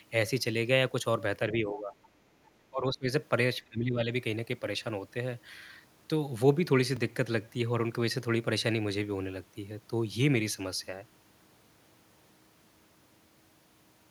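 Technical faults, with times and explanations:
1.52 to 1.93 s, 2.70 to 3.08 s, 3.69 to 4.10 s: speech suppressed in double talk. The voice dips by about 10 dB at first, then by about 20 dB. This is likely an echo canceller turning down both talkers.
1.75 to 1.95 s: other side's voice leaking through. A faint second voice sits about 20 dB under the talker. Echo cancellation likely left some loudspeaker sound in the microphone.
6.96 s: block of digital silence. A 2.67 ms hole cuts out and back with no fade, too short to be heard as silence, so it comes across as a tick or dip. Its length fits a 128-sample buffer left unfilled.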